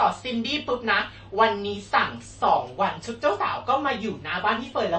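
Heavy MP3 compression at a low bitrate, around 32 kbps, is the likely cause of the damage running through this whole speech clip: the encoder has cut everything above 8.3 kHz and is switching weak frequency lines on and off, giving a watery, swirling texture, chirpy s sounds and smeared attacks.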